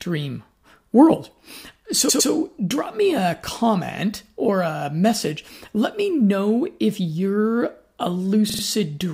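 Stutters at 2.08 to 2.30 s, where a 107 ms slice plays twice more, and at 8.49 to 8.62 s, where a 36 ms slice plays three more times. These are repeated frames: the same compressed frames are decoded again, lengthening the speech.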